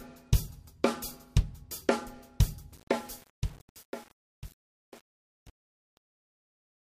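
From 2.72 s to the end at 6.81 s, the fade-out shows truncation distortion. The fade begins at about 2.7 s and glides down. As it drops, the level stage keeps too few bits and adds no dither. The grit is coarse, which fits about 7-bit resolution. Low-level detail turns into square steps. The tail sounds rough and grainy toward 6.81 s.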